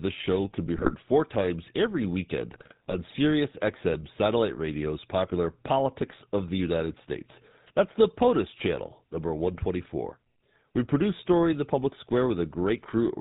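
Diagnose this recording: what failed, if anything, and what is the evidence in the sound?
The codec stage shows GSM full-rate coding throughout: the speech has a plainly audible buzzy, gravelly roughness and nothing above 4 kHz, which fits the 13 kbps regular-pulse excitation. A plain low-pass filter would dull the speech without adding this rasp.

GSM bit errors on the network link cause brief squawks and gargling from 0.77 to 0.95 s and from 2.52 to 3.11 s. Corrupted filter, pitch and gain values bend the spectrum frame by frame. Packet-loss gaps would instead produce silences or smoothed repeats.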